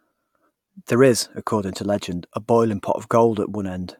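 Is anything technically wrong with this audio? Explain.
No, nothing technically wrong can be heard in this speech recording; the signal stays intact and continuous throughout.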